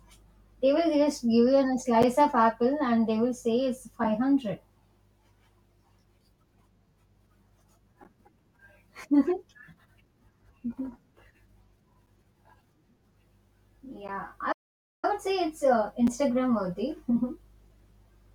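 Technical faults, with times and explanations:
2.03, 6.05, 8.04, 12.07, 14.08 and 16.07 s, gap between stream segments: the speech drops out for 4 to 12 ms at each point, the first just before "of apple and they" and the last just after "would say it's uh". The stamps fall on a 2-second grid, so consecutive segments' timestamps leave small holes that the player pads with silence. Nothing is lost. Each hole is a hard-edged blank in the waveform and a thin vertical gap across all frequencies on a spectrogram.
14.52 to 15.05 s, playback stall: the speech stops abruptly for about half a second, then resumes with "would say it's uh". The likely cause is a player that ran short of buffered data or had its audio thread blocked, producing silence until it caught up. In the waveform this is a flat line of about 0.5 s between stretches of speech, and on a spectrogram a wide, empty band running top to bottom.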